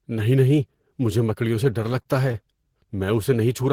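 From 1.54 to 2.65 s, just after "نہیں نہیں مجھے", the speech shows repeated stalls (stutter): about ten brief holds, each at most 23 ms, where the jitter buffer ran dry and the receiver stretched the last sound. The speech drags and stutters, with nothing lost.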